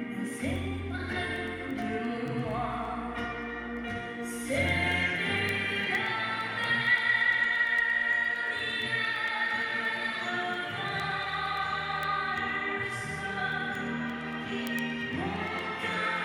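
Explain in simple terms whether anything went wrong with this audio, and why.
Word clock ticks run from 0.21 s to 16.16 s, about ten per second. The receiving device runs on its own clock, slightly out of step with the sender's. Each time the two slip apart, a single sample is dropped or repeated, producing a sharp tick.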